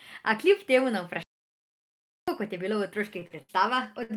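At 1.23 s, just after "kljub temu na", the speech cuts out into dead silence for about 1.05 s, then resumes at 2.28 s with "kot je bilo v". This is a playback stall, likely the player running short of data or its thread being blocked until output could continue.

After "kot je bilo v", at 3.19 s and again at 3.27 s, a sound is held unnaturally long with a slight buzz or dip, by about 17 ms and then 35 ms. Each is a short stall from a late packet. The jitter buffer emptied, and the receiver stretched the last sound until the data arrived, losing nothing.

From 3.43 to 3.52 s a brief held, fading sound replaces the speech, and when it picks up again about 60 ms of material is gone. This burst of packet loss made the receiver extend and attenuate the last sound across the gap, then jump ahead.

At 4.03 s a final late-packet stall holds the sound for about 62 ms before it carries on from the same point.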